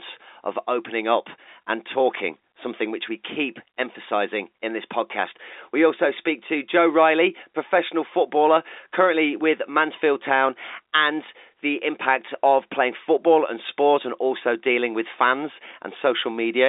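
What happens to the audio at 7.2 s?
Nothing goes wrong at 7.2 s: the speech carries on intact through that moment, heard through the narrow telephone band of G.711 coding with nothing above about 3.8 kHz.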